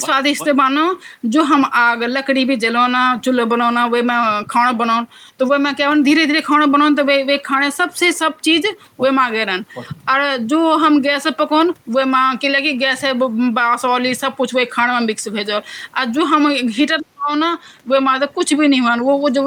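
From 16.99 to 17.31 s the speech dips sharply, falling nearly to silence for about a third of a second before recovering. This is speech suppressed in double talk: likely both ends spoke at once, and the echo canceller, unable to separate talker from echo, attenuated both.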